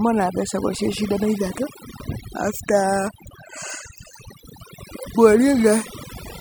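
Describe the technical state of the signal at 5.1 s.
At 5.1 s the speech is under overdone noise removal, which runs through the whole clip. A noise reduction stage set far too aggressively is cutting individual frequency bands whenever they sit near its noise estimate, taking quiet speech detail with them. The background drops and breaks up into twinkling specks.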